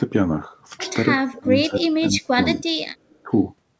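A speech recording with two faults. Speech is suppressed in double talk three times. From 1.3 to 1.51 s the voice dips by about 25 dB. From 1.68 to 2.74 s it drops harder, up to about 30 dB, and is affected for roughly 0.7 s in total. From 3.23 to 3.31 s there is a brief dip of about 10 dB. The likely cause is an echo canceller that heard both sides at once, could not tell this talker from loudspeaker echo, and turned everything down. Just before that last dip, from 3.09 to 3.23 s, an echo leak appears. A faint delayed copy of the voice returns 225 ms late, far below the main speech at roughly 35 dB down. It is likely residual loudspeaker sound that the loudspeaker side's canceller let through and sent back. The audio has nothing above 8 kHz, which is what the call path's bandwidth limit produces.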